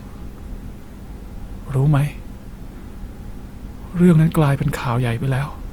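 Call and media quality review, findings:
Grainy, rough texture on the speech throughout, with tonal parts turning noisy but no swirling holes; bandwidth stays wide, reaching about 20.2 kHz. Likely Opus compression in music mode, band energy kept and starved bands noise-filled, consistent with roughly 24 kbps.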